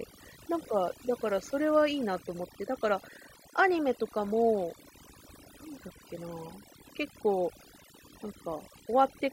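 Overdone noise removal runs throughout the speech. A noise reducer set far too aggressively pulls individual frequency bands down whenever they sit near its noise estimate. The background drops and breaks up into twinkling specks, and the voice loses its quieter detail.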